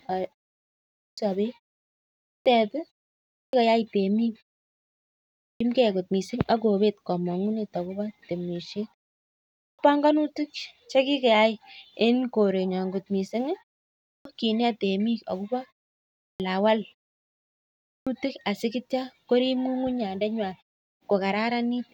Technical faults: clipped start after a pause

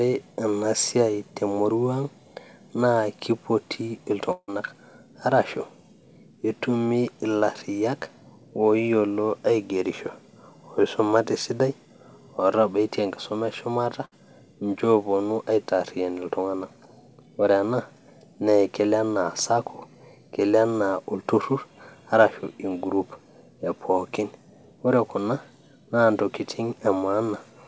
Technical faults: long network dropout; burst of packet loss

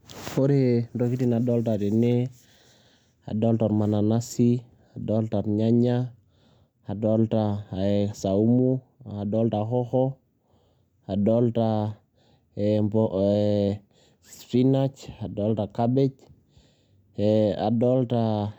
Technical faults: none

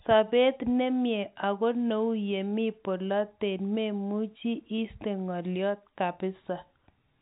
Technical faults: none

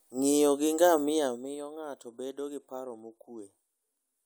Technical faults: zipper noise

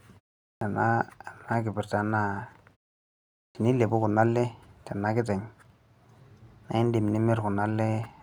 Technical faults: clipped start after a pause

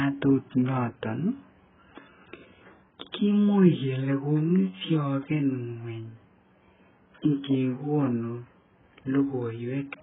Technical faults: AAC compression

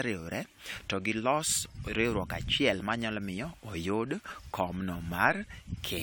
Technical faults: generation loss; DC step

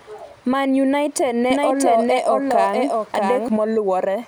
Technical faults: doubled audio track

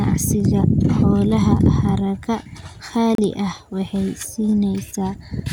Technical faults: digital broadcast dropout

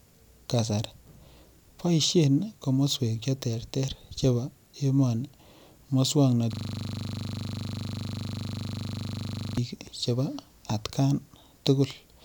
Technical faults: system hang loop

